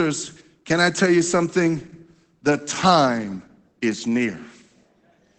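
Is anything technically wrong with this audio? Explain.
Yes. Opus voice compression, at a plainly audible level, runs through the whole speech clip. The sound is cut off above about 8.7 kHz, which points to wideband SILK coding. Its muffled, hoarse, slightly robotic quality fits a low bitrate around 12 kbps, where the linear-prediction coder can spare only a coarse excitation signal per 20 ms frame. A spectrogram would show a flat ceiling at 8.7 kHz with blurred, smeared harmonics below it.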